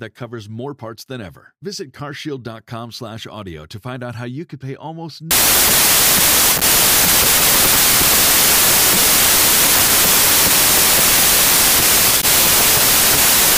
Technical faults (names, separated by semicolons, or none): wrong sample width